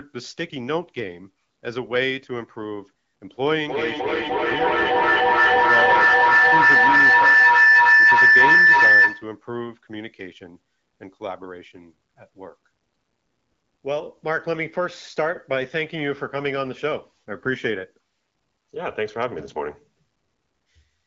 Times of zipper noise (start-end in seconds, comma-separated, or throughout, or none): none